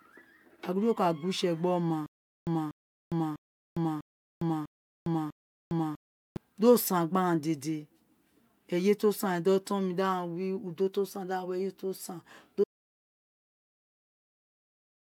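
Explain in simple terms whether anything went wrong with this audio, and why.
From 2.06 to 6.37 s the speech has a stutter with silent gaps: the same 241 ms snippet plays six times, each followed by about 408 ms of dead silence. That steady repeating, rather than a single clean gap, points to a stalled player likely retrying its last fragment.

At 12.64 s there is an audio dropout to silence that lasts to the end. The speech cuts off mid-flow into complete silence with no background sound, and nothing repeats. That fits a likely lost input while recording continued writing empty audio.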